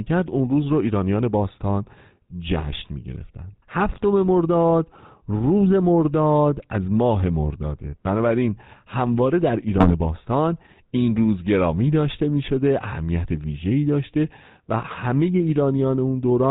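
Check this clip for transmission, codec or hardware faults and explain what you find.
The speech shows two faults: GSM full-rate codec coloration throughout and two brief bursts of GSM bit errors.

The GSM full-rate codec damage is plainly audible for the whole clip. The codec rebuilds the voice from a vocal-tract filter driven by a thinned, regularly spaced pulse excitation, and nothing passes above 4 kHz. The result is a buzzy, gravelly roughness, which fits a 13 kbps full-rate stream. Unlike plain band-limiting, which only sounds muffled, this adds a grainy texture.

GSM bit errors strike from 2.58 to 2.64 s and from 9.78 to 9.91 s. Corrupted filter, pitch or gain values make the decoder bend the spectrum or jump the level, causing squawks, pops and gargling. The short spans fit a few damaged 20 ms frames. Packet-loss concealment would sound smoother and more repetitive than these erratic bursts.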